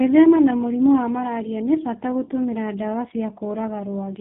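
Tandem speech coding runs throughout: the speech sounds as if it passed through two speech codecs in a row, which points to a GSM full-rate stage feeding G.729A, with nothing above 3.8 kHz. The second coder re-encodes the first one's errors, so the roughness and warble are heavier than any single narrowband codec would produce.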